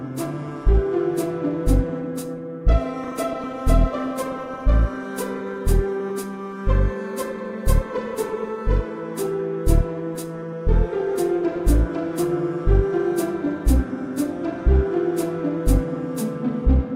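Nothing in these everyday sounds stands out as a technical fault at any point, so there's nothing to flag here.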